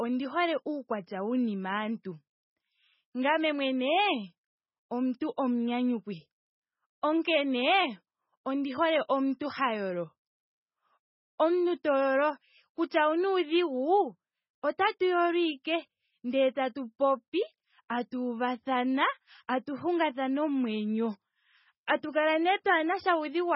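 From the start, the speech sounds dull and watery, with nothing above 5.6 kHz and a swirling, unstable texture where quieter detail flickers in and out. This is heavy MP3 compression damage, likely from encoding at a very low bitrate, which fits something around 16 kbps. Short of bits, the encoder cut the treble at a fixed point and dropped weak frequency lines from frame to frame, so the tone keeps shifting.

At 1.06 s, a sharp attack is preceded by a brief hiss about 12 ms long, and the onset sounds softened rather than crisp. This is pre-echo. The codec spread its quantisation noise across the whole transform block, so noise scaled for the loud attack also filled the quiet stretch just before it, smearing the transient backwards in time.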